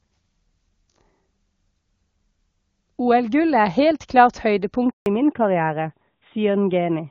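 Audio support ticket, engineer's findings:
Handover gap at 4.90 to 5.06 s. Speech cuts out within a few tens of ms, then 160 ms of silence. Network handover; no speech frames delivered during the switch. Content in that span lost, not recoverable.

Fallback to narrowband from 5.06 s to end. Nothing above 4 kHz; speech duller, rougher. Before the cut, clean HD Voice, consistent with AMR-WB near 23.85 kbit/s. After it, a legacy narrowband codec, which fits AMR-NB 12.2 kbit/s.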